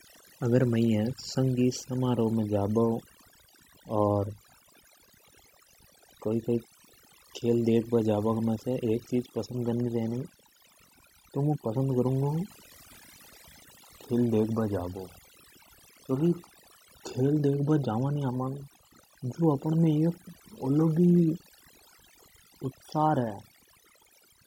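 From start to finish the speech carries overdone noise removal: the denoiser, set far too aggressively, pulls individual frequency bands down to near silence whenever they sit close to its noise estimate. Quiet speech detail vanishes with them, leaving a near-silent background dotted with twinkling specks.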